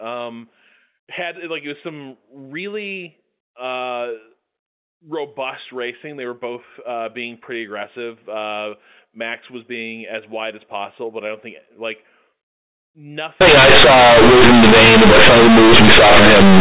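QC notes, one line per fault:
13.41–16.6 s: companded audio read as linear. The mu-law bytes play raw as 8-bit samples with no expansion, so it blasts into harsh buzz and noisy pauses.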